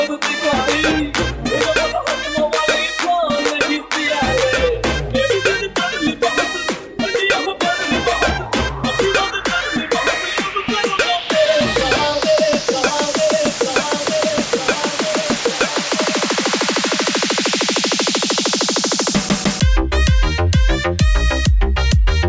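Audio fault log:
Nothing in the audio stood out as a problem on listening.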